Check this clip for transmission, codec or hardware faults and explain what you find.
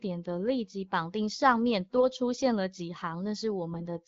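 Two short bursts of AMR bit errors, at 1.96 to 2.04 s and 3.72 to 3.82 s, each a few percent of bits flipped. Damaged pulse positions and gain values make the speech briefly hoarse and gargly while pitch and level hold.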